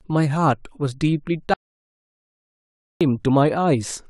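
At 1.54 s the speech cuts off mid-flow into an audio dropout to silence lasting until 3.01 s, about 1.47 s of dead silence with no room tone. The input was likely lost while recording continued, so that stretch of speech is gone.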